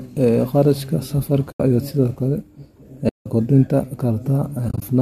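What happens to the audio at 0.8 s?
Nothing goes wrong at 0.8 s: the speech there carries no dropout, click or distortion, only the light coloration of what is likely low-delay AAC compression, which runs through the whole recording.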